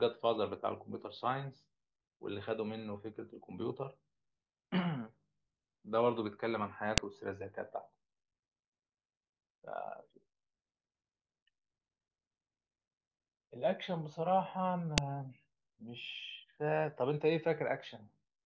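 At 6.98 s and 14.98 s, a file header played as audio gives a sharp snap. Its 8-second spacing, unrelated to the speech, marks joined pieces rather than random dropouts.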